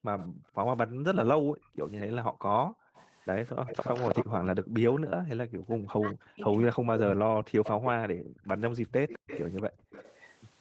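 From the start to 3.66 s, the room sound is being gated by the echo canceller. It clamps the microphone down hard while the far end plays, so the background dips by as much as about 40 dB, for roughly two seconds in total, then springs back.

A faint delayed copy of the talker turns up at 0.19 to 0.28 s and 1.67 to 1.76 s, very low at about 20 and 35 dB under the speech. At 2.94 to 4.25 s it's almost as loud as the speech, only about 5 dB down, and trails the original by 214 ms. That's an echo leak, likely from a loudspeaker-side canceller letting residual echo through.

From 4.35 to 6.88 s, the voice keeps sinking and breaking up, dropping by up to about 40 dB across roughly two seconds. This is likely speech suppressed in double talk: with both sides talking at once, the canceller ducks the near talker along with the echo.

The echo leak comes back at 5.91 to 7.89 s, about 10 dB down. 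It overlaps the second background-gating stretch, from 7.16 to 9.9 s, where the room sound again drops by up to about 40 dB for around a second and a half.

The last leak runs from 8.89 s to the end, about 15 dB under the speech, still at the same 214 ms lag. Throughout, the audio carries the wideband Opus call character, with nothing above 8 kHz.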